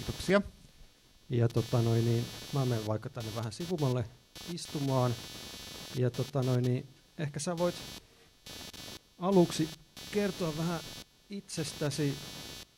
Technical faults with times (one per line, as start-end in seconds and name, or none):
0.00-12.78 computer activity noise